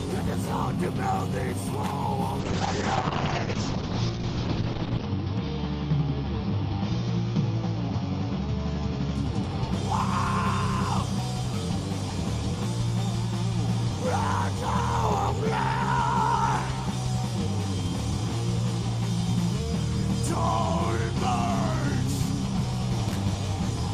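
A short irregular burst of scratchy crackle from 1.74 to 1.91 s is loose connector crackle, a worn contact briefly making and breaking the signal. From 2.4 to 9.21 s the sound turns rough and muffled, with highs cut off near 6 kHz. This is a call bitrate drop, consistent with the encoder falling from about 48 kbps to around 7 kbps and staying at its lowest for 2.66 s. The same connector crackle returns at 23.09 to 23.21 s.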